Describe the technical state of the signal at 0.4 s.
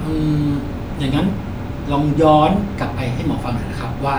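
At 0.4 s the speech signal is intact, with no audible dropout, distortion, click or other technical fault at that moment.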